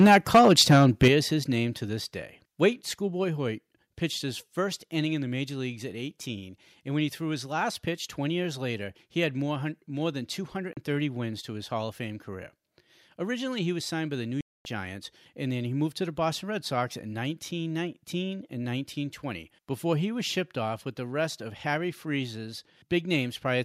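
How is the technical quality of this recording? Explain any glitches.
The recording has three kinds of fault: harsh distortion at the very start, sudden level drops in the first few seconds, and two brief silences later on.

Microphone overload, 0.0 to 1.08 s: the opening second sounds crackly and brittle on its loudest moments, with peaks pushing about 8 dB past the converter's ceiling and roughly 7 percent of samples flattened. The likely cause is an input volume set too high, so the tops of the waveform are sliced off and the squared edges add a gritty, buzzing layer to the voice.

Microphone volume stepped down, at 0.07 s, 1.08 s and 2.1 s: the voice and background drop abruptly in level, first by about 2 dB, then by about 7 dB just before "his name to this", and again by about 2 dB right after it. The likely cause is the call software reacting to the clipped input by cutting the device's input gain in single jumps, so each step sounds like the speaker suddenly backing away.

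Bluetooth dropout, 10.73 s and 14.41 to 14.65 s: the audio cuts to silence for about 37 ms, then later for about 243 ms, and resumes as though it had played on underneath, with the missing sound simply gone. The likely cause is wireless packets arriving too late and being discarded. The short hole fits a couple of lost packets, and the longer gap fits a run of about a dozen.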